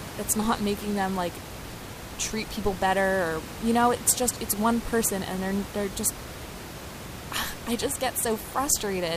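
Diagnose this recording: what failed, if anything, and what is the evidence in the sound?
Nothing in the chain has failed here; the speech comes across intact, and the only thing under it is the room's own background noise sitting about 12 dB down, which is simply part of where the microphone was.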